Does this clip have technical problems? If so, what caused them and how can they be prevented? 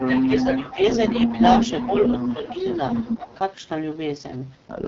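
Yes. Three problems are audible.

The whole clip has heavy AMR wideband (HD Voice) codec damage. The speech sounds rough and raspy, which fits the lowest AMR-WB rate, 6.6 kbit/s. Nothing is heard above 7.6 kHz. Prevention: allow the call to negotiate 12.65 kbit/s or higher.

An echo leak is heard from 0.0 to 0.2 s, from 0.59 to 0.73 s, and from 1.07 to 3.35 s. A copy of the voice trails about 0.2 s behind. It is faint at first, then about as loud as the speech. The likely cause is a loudspeaker far end whose echo canceller let its own pickup through. Prevention: use a headset there or tune the canceller.

Speech suppressed in double talk also shows up. The voice dips from 0.08 to 0.78 s, 1.27 to 1.38 s, 2.36 to 2.58 s and 3.17 to 3.29 s. The drops range from slight to about 15 dB. Overlapping talk likely confused the canceller, so it turned everything down. Prevention: use a canceller with better double-talk detection.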